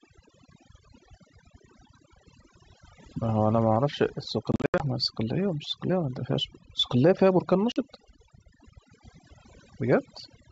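Throughout the speech, overdone noise removal leaves near-silent gaps that twinkle with specks, unlike plain low-pass dullness, because individual bands are gated off.

From 4.52 to 4.84 s, packet loss on an ADPCM call punches hard-edged holes totalling 180 ms over 280 ms. A shorter 40 ms loss follows at 7.72 s. Each resumes slightly distorted as the predictor resynchronises, which a clean dropout wouldn't cause.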